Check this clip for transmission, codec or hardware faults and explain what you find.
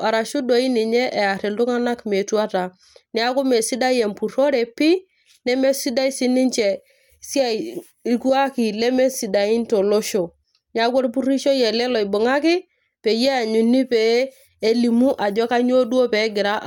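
No faults can be heard anywhere in this speech.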